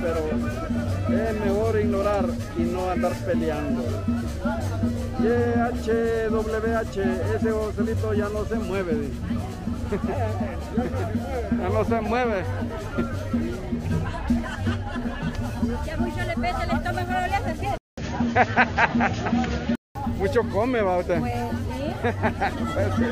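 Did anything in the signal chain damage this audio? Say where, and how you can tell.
Yes: from 17.78 to 19.95 s a 200 ms gap precedes duller sound, about 5 dB different in level, cut off at 7 kHz, with a faint new noise floor, likely an input switched to a poorer device at capture.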